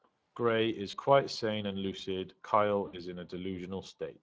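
Speech, coded with the Speex codec throughout. The damage is plainly audible: the voice sounds noisy and hoarse. That fits a mid-rate setting near 20 kbps, where the excitation signal gets too few bits. Audio stops at 8 kHz. VoIP packet loss concealed by the speech codec occurs twice. At 0.91 to 0.97 s, about 20 ms of audio is lost. At 2.87 to 3.02 s, about 60 ms is lost. The decoder stretches the last sound into a buzzy tone or coloured noise that fades, and the voice stays weak briefly afterward.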